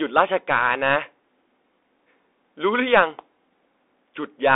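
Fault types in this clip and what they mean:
Bluetooth CVSD headset codec: The speech sounds thin and boxed, with nothing above about 3.8 kHz, a line band of roughly 300 Hz to 3.6 kHz, scratchy s sounds and a granular hiss, consistent with the one-bit, 64 kbit/s up-down coding of a Bluetooth headset link.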